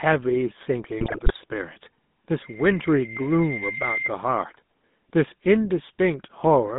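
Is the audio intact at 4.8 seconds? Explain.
No. At 4.8 s, as throughout the clip, the GSM full-rate codec's pulse-driven vocal-tract model gives speech a buzzy, gravelly roughness within roughly 150 Hz to 3.6 kHz, unlike plain telephone band-limiting, which only muffles.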